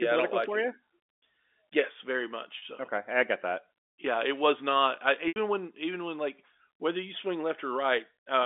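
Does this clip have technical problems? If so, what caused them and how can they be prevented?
Yes. At 2.58 s the speech briefly hangs on a slightly buzzy, held tone for about 40 ms, and at 5.28 s a longer 80 ms hold buzzes, fades into silence, then cross-fades back into the speech. This is packet loss with pitch repetition: audio packets never arrived, so the receiver filled each gap by repeating the last pitch period and fading it out. The second gap, which fits about four 20 ms packets, outlasts the fade. The narrow telephone band of the G.711 coding can be heard throughout. Prevention: give voice traffic priority on the network and use forward error correction or redundant packets so single losses can be rebuilt.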